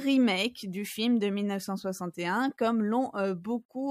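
No technical faults can be heard anywhere in this recording, and the signal stays steady throughout.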